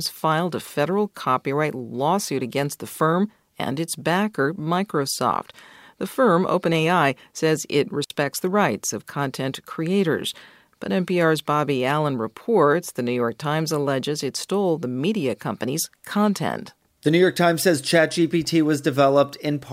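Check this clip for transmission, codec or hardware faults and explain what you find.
One transmission fault is present in this speech clip. From 8.04 to 8.10 s, between "says it" and "the rights of content", a digital wireless dropout occurs: the receiver lost too much data and muted for 60 ms, leaving a clean near-silent gap with no noise burst.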